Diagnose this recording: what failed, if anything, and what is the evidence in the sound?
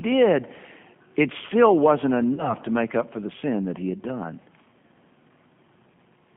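The whole clip carries G.729 codec damage at the codec stage. The speech is band-limited to roughly 150 Hz to 3.4 kHz and has a plainly audible rough, slightly synthetic texture, which points to an 8 kbit/s G.729A stream. The coder rebuilds each 10 ms frame from a vocal tract filter, a pitch predictor and a few sparse pulses. On a spectrogram, energy stops sharply near 3.4 kHz and the harmonics look smeared and grainy.

A network-stage fault appears as VoIP packet loss concealed by the speech codec, from 2.34 to 2.55 s. About 40 ms of audio went missing, which fits two 20 ms packets. The decoder filled the gap by repeating its last pitch and filter with falling gain, stretching the sound into a buzzy tone or coloured noise that fades. Recovery lags because each frame builds on the previous one. A waveform shows a decaying stretch, and a spectrogram shows frozen spectral content instead of moving formants.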